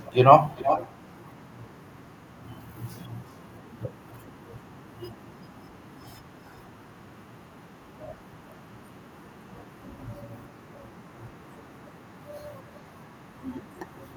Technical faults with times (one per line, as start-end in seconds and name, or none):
0.04-0.18 echo leak
0.56-1.16 echo leak
12.75-12.80 echo leak